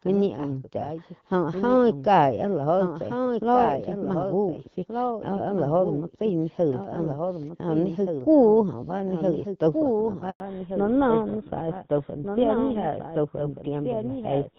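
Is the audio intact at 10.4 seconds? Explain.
No. A 100 ms handover gap runs from 10.3 to 10.4 s: the voice dies away within a few tens of milliseconds while the call switches networks and no speech frames arrive. From 10.4 s to the end, a fallback to narrowband takes effect as the link drops from AMR-WB to GSM full rate at 13 kbit/s. Everything above 4 kHz is gone, leaving the sound duller and rougher. Throughout, including at this moment, a doubled audio track is audible: a clean full-band copy about 5 dB quieter trails roughly 1.5 s behind, likely from a second, slower capture path.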